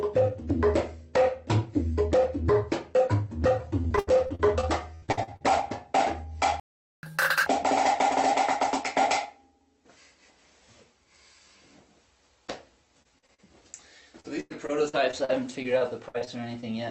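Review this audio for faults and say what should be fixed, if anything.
Repeated packet loss (robotic sound) occurs at 3.81–5.42 s, 13.02–13.40 s and 14.20–16.64 s. Runs of short gaps, the longest 100 ms, are patched by extending the previous sound, which makes it choppy. Prevent this with a larger jitter buffer and forward error correction on the lossy link.

A playback stall silences the output from 6.60 to 7.03 s, about 430 ms, before the sound resumes. The likely cause is the player running out of buffered data or its thread being blocked. Prevent this by keeping more audio buffered and keeping the playback thread free of blocking work.

Catch-up at higher speed follows immediately, from 7.03 to 7.46 s. The backlog plays at 2× speed, raising the pitch by roughly ten semitones. Prevent the audible jump by catching up gradually with time-stretching that preserves pitch rather than plain resampling. 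The call path limits the band to about 8 kHz throughout.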